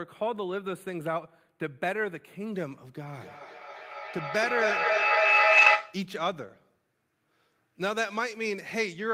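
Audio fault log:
0.00–2.53 s, channel delay (comb filtering): One channel arrives slightly late and the two are summed to mono. The sound is hollow and dull. The delay is around a tenth of a millisecond, which fits about four samples, so the first cancellation notch falls near 5 kHz.
3.15–6.12 s, feedback howl: Two devices share the room, and the microphone-to-loudspeaker loop gains level each trip. Repeats grow rather than fade and narrow to a tone near 3 kHz. The loop repeats roughly every 300 ms and the howl peaks about 9 dB above the speech.
5.57–5.67 s, lost packets rebuilt from error correction: There is no gap, because low-bitrate backup copies carried in following packets were decoded. The rebuilt 60 ms sounds rougher and noisier than its surroundings, which fits three lost packets. It falls inside the howl.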